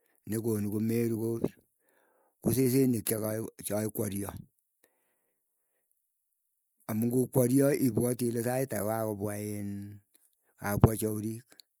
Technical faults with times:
none

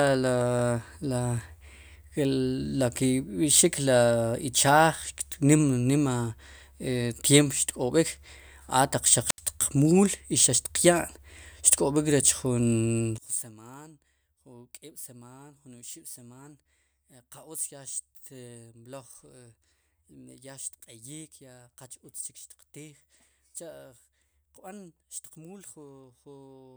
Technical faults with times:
9.26-9.40 wireless microphone squelch dropout
13.18-26.77 one channel inverted

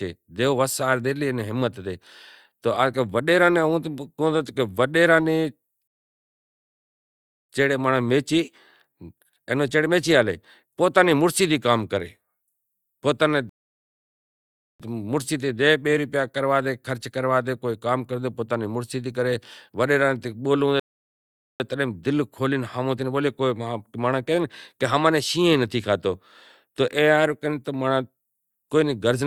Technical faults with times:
5.87-7.49 rebuffering stall
13.49-14.80 rebuffering stall
20.80-21.60 rebuffering stall

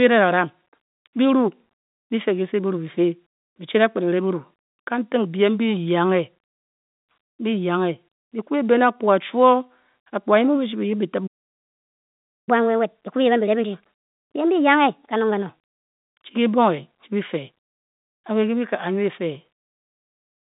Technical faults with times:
11.26-12.49 playback stall
12.49-15.49 catch-up at higher speed

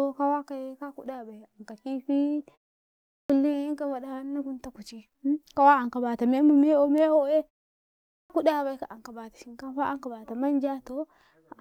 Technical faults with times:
2.89-3.30 clipped start after a pause
7.93-8.30 clipped start after a pause

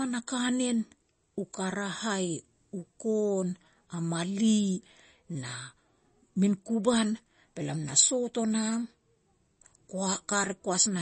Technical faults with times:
0.00-11.01 MP3 compression

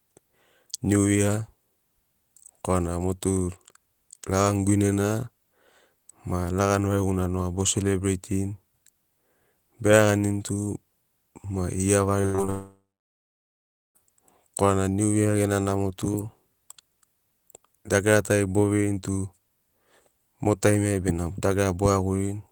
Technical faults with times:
12.21-12.50 repeated packet loss (robotic sound)
12.50-13.97 long network dropout

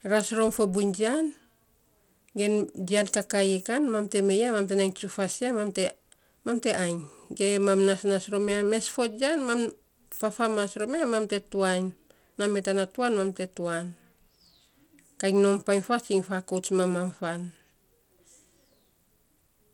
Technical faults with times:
0.00-19.73 Bluetooth SBC compression

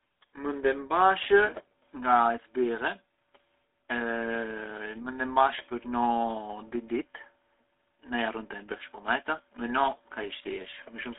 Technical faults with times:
0.00-11.19 GSM full-rate codec

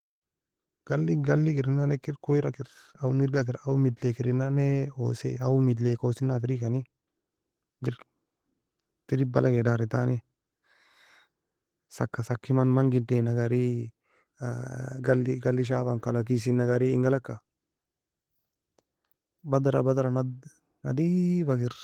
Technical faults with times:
0.00-21.83 Opus voice compression

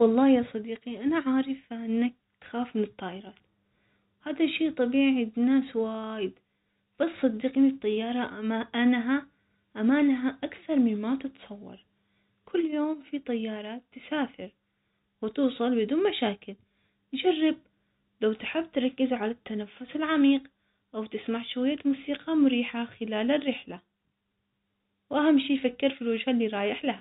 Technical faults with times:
none

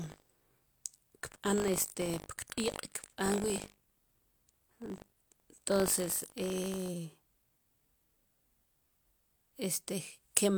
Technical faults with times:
0.00-6.89 buffer tearing

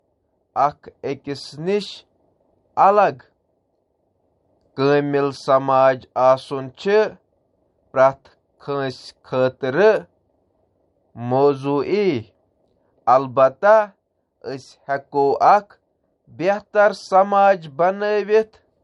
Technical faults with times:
0.00-18.84 low-bitrate audio saved at a high bitrate

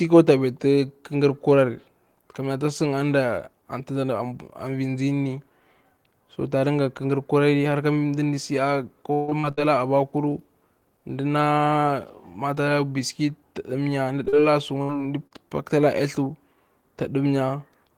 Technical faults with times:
9.13-9.59 repeated packet loss (robotic sound)
14.25-14.44 short concealed packet loss
14.82-14.91 burst of packet loss
15.27-15.33 short concealed packet loss

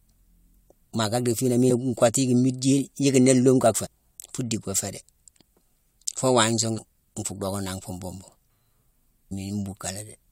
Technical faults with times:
1.69 damaged data in a compressed stream
3.85-3.87 damaged data in a compressed stream
6.77-6.79 damaged data in a compressed stream
9.31 damaged data in a compressed stream

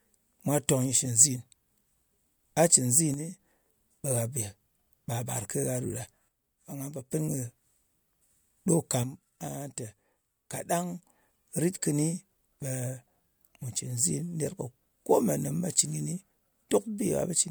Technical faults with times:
3.14-3.39 one channel drops out
6.28-7.12 one channel drops out
9.04-11.03 one channel drops out

